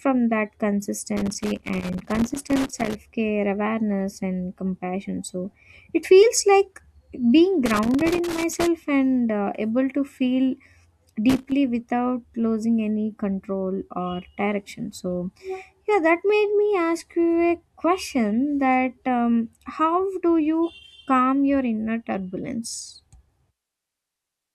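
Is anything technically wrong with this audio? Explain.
Yes. Loose connector crackle chops this speech at 1.17–2.95 s, 7.66–8.67 s (after "it feels like being", before "and uh able to"), and 11.30–11.52 s (before "without losing any control"). A flaky contact makes and breaks, giving irregular scratchy bursts rather than the evenly spaced clicks of digital dropouts.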